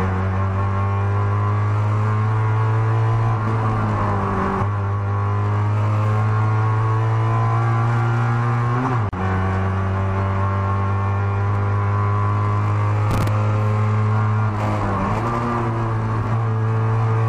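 At 9.09 s the audio drops into a silence of about 37 ms, ending at 9.13 s, before carrying on from where it stopped. This is a gap at a join of encoded pieces: separately encoded segments were spliced without trimming the encoder's start-up delay and end padding. On a spectrogram it shows as a thin blank column across all frequencies, its edges slightly smeared; the waveform shows a flat line. From 13.11 to 13.28 s a burst of gritty crackle rides on the sound. This is processor overload crackle: the processor repeatedly missed its deadlines for very short buffers, around 3 ms each, and stale audio was replayed in place of fresh samples. The waveform shows a cluster of hard, jagged discontinuities, and the spectrogram a dense row of broadband vertical ticks.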